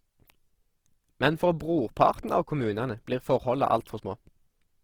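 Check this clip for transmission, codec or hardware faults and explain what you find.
One codec fault is present across the whole clip. Throughout the speech, the sound is rough and grainy with noisy, smeared tonal parts. This is likely Opus compression in its music-style CELT mode at a low bitrate, around 16 kbps. The encoder keeps each band's energy but fills starved bands with folded or noise-like content. Bandwidth stays full, reaching about 20.4 kHz, so the damage is graininess, not muffling.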